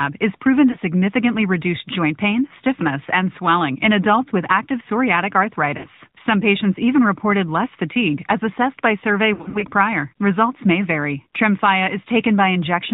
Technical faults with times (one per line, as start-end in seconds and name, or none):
0.00-12.93 AMR narrowband mobile codec
0.72-0.76 lost AMR speech frames
5.78-5.88 lost AMR speech frames
9.34-9.65 lost AMR speech frames